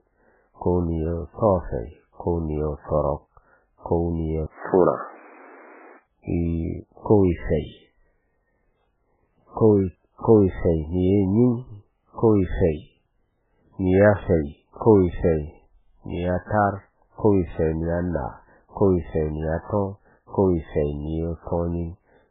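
Heavy MP3 compression runs through the whole speech clip, likely from a very low bitrate of around 8 kbps. Nothing survives above 3.8 kHz, and weak frequency lines flicker on and off, giving a watery, swirly texture and smeared attacks. Unlike a device change, this cutoff never moves.

From 4.46 s to 6.05 s the input appears switched to a poorer device, likely another microphone or a headset profile. An 80 ms silence marks the switch. The band then narrows to 3 kHz, the level shifts by about 5 dB, and new noise appears roughly 30 dB below the speech. Unlike the fixed codec cutoff, this dull stretch has a clear start and end.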